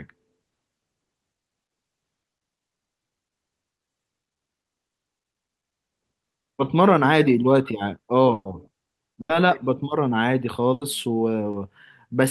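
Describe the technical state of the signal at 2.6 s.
At 2.6 s the speech signal is intact, with no dropout, glitch or other fault, only the ordinary character of its passage through the WebRTC call path.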